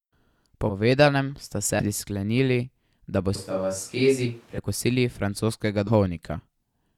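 Compressed frames skipped at 0.69–0.72 s and 1.79–1.86 s: whole coded frames never get decoded, so the speech jumps ahead by roughly a tenth and then about 0.15 s, consistent with 20 ms frames. Switch to a distant microphone from 3.36 to 4.58 s: the speech suddenly turns roomy and hollow with thinner bass at much the same level, room noise sitting around 35 dB below it, likely because the close microphone dropped out and a farther one took over. Compressed frames skipped again at 4.25 s, a jump of roughly 70 ms, and at 5.87–5.90 s, roughly a tenth of a second.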